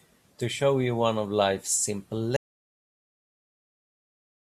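At 2.37 s the speech cuts into an audio dropout to silence through the end, likely a lost input; unlike a pause, room tone vanishes.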